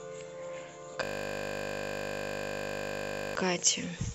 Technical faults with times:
1.03-3.35 system hang loop

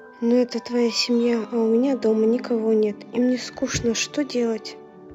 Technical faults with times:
0.00-5.14 sample clock jitter

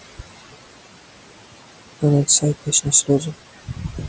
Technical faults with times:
0.00-4.08 noise suppressor artifacts
3.66-4.08 speech cut by the noise suppressor

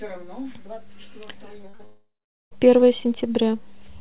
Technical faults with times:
1.62-1.81 short concealed packet loss
1.85-2.53 long network dropout

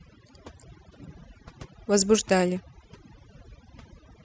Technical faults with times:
0.00-4.25 overdone noise removal

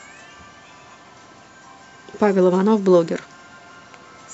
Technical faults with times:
none

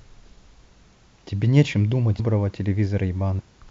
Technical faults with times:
2.18 compressed frames skipped
3.38-3.40 compressed frames skipped

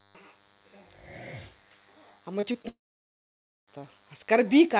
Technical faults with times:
0.00-4.80 DECT cordless phone buzz
2.40-2.66 short concealed packet loss
2.68-3.69 long network dropout

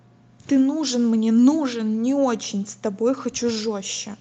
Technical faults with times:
none

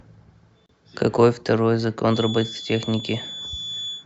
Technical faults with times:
0.66-0.69 gap at a join of encoded pieces
2.06-4.06 feedback whistle

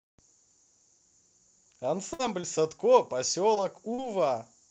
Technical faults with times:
2.13-2.21 burst of packet loss
2.41-2.45 short concealed packet loss
3.55-3.58 short concealed packet loss
3.94-4.00 short concealed packet loss

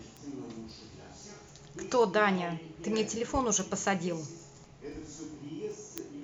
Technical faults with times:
0.17-5.98 word clock ticks

